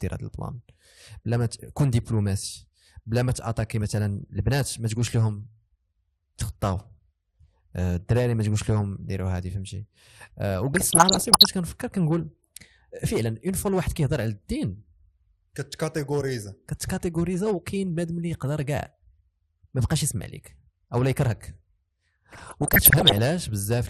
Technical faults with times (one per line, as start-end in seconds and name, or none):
0.00-23.89 MP2 compression
10.73-11.46 DAB burbling
22.33-23.19 DAB burbling